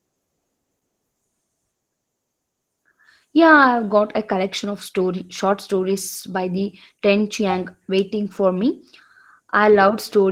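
From start to finish the speech carries plainly audible Opus voice compression, running in hybrid mode: SILK codes the lower band and a thin CELT layer adds the top. Coarse excitation makes it hoarse and slightly robotic, which fits roughly 16 kbps.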